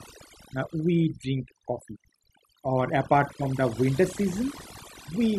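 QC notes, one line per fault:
Throughout: overdone noise removal. The noise reduction was set too aggressively, so frequency bands sitting near the noise estimate are pulled far down or gated off along with quieter parts of the speech, leaving near-silent gaps with twinkling specks.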